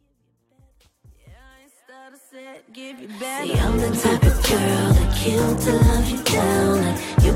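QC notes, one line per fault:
No faults found; the smooth fade-in from the top rises to full level by 3.99 s without any click or hard edge.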